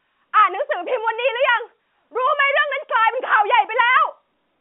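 No technical faults can be heard in the speech, which comes over an ordinary G.711 A-law telephone channel at 64 kbps and so occupies the usual line band of about 200 Hz to 3.5 kHz.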